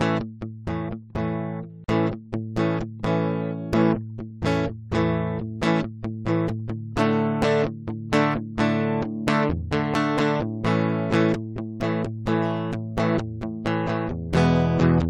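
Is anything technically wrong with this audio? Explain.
Yes. At 1.84 to 1.88 s the music drops out for about 41 ms. This is a gap at a join of encoded pieces. The pieces were encoded separately and joined untrimmed, so encoder start delay and end padding remain. The silence has smeared edges, and the music resumes where it stopped.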